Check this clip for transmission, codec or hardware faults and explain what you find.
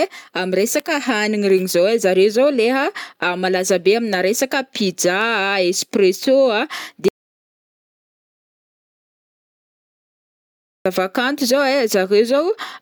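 Three faults are audible in this speech clip: two bit error spikes and one audio dropout to silence.

The bit error spikes fall at 2.09 s, just after "regny zao ai", and at 5.21 s. Each is a flipped bit in the digital data, pushing two or three consecutive samples far off their true value by a power of two before they snap back. Each is heard as a single sharp tick unrelated to the speech. On the waveform it is a lone needle; on the spectrogram, a thin vertical line across all frequencies.

The audio dropout to silence runs from 7.08 s to 10.86 s, about 3.8 s. The speech stops abruptly mid-flow and resumes just as suddenly, with dead digital silence between and no room tone. The likely cause is a lost input, such as a disconnected device, a failed link or an accidental mute, while recording carried on writing zeros. On the waveform this appears as a flat line. On the spectrogram it is a fully blank block with hard edges.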